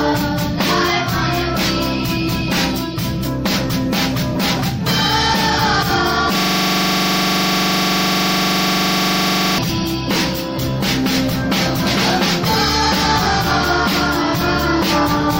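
From 6.40 s to 9.58 s the audio locks into a system hang loop: a single 42.67 ms slice repeats exactly, about 75 times, before normal playback resumes. The host or driver stalled while the sound hardware kept replaying the same ring buffer, and the loop length fits a 2048-sample buffer. With each repeat this short, the result is a steady buzz at 23.4 Hz, the loop rate, rather than a stutter.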